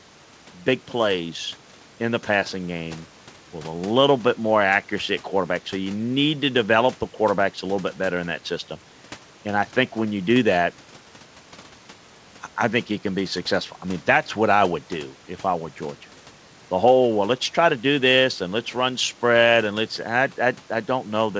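A speech recording with nothing technically wrong in it.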